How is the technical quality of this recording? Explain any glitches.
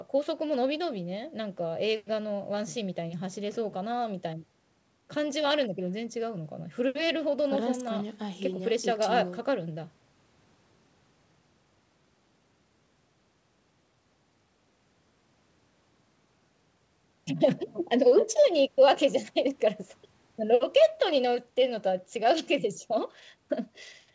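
No glitches to report: the speech carries the normal signature of a call chain, with the call microphone processing trimming the lowest bass and the WebRTC call path leaving nothing above 8 kHz, which fits G.722 at 64 kbps.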